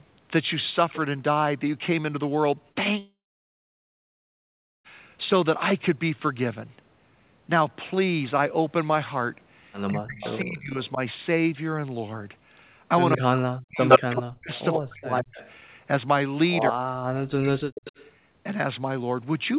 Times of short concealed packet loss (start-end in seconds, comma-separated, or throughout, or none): 2.72-2.78